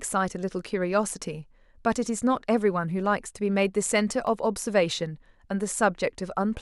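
Sharp single clicks at 2.99 s and 4.27 s in the speech are likely dropped samples, a tiny fraction of a millisecond lost, making the waveform jump abruptly.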